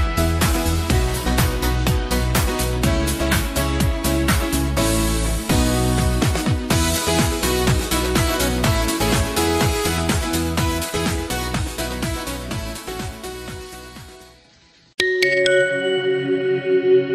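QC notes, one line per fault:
Throughout, MP2 compression: the sound is dull, with a gurgling, granular grain that is plainly audible, likely from Layer II coding at a low bitrate around 80 kbps, where upper sub-bands are starved of bits and switched off. A spectrogram shows the top end flickering in blocky bands.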